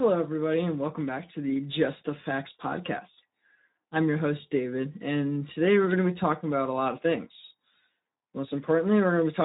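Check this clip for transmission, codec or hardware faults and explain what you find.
One codec fault runs through the whole clip. It is Speex codec damage, and it is plainly audible from start to finish. Speex is a CELP speech coder. It models the voice with a filter and spends its bits on the excitation. Here that excitation is starved, which fits a low setting of about 11 kbps. The speech sounds noisy and hoarse as a result. Nothing survives above 3.8 kHz, so the sound is also dull and narrow.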